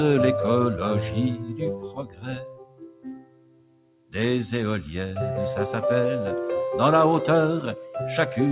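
A noise suppressor made for speech was left running on this material for the whole clip. It treats steady tones, ambience and decaying tails as noise and pulls them down, while sharp onsets slip through. The gain it applies keeps shifting over a range of around 20 dB, so the sound pumps and flutters, with sustained parts thinning and sinking under the attacks that precede them. All of it sits inside a band that stops at 4 kHz, which points to a narrowband G.711-style call path.

From 1.36 to 4.14 s there is a sound cut by the noise suppressor. For around three seconds it classed this passage as noise and clamped it harder than the surrounding audio, with the deepest drop about 18 dB. Held and fading portions lose level and have their decays chopped short, while transients stay audible, so the passage sounds hollowed out and gated.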